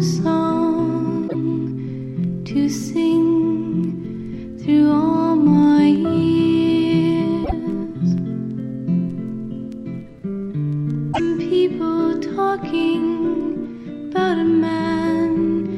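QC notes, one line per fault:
1.24–1.35 s, 7.41–7.52 s, 11.09–11.20 s: damaged data in a compressed stream. Each is a short glitch lasting about 0.11 s. Some bytes in the encoded stream are wrong at these points. The decoder misreads the affected frames and loses its place. It then hunts for the next valid frame header before clean audio resumes. That brief misdecoding is what produces the glitch.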